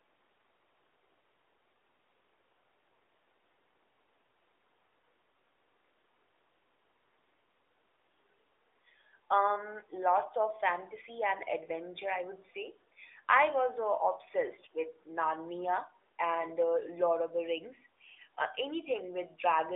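No technical faults are audible.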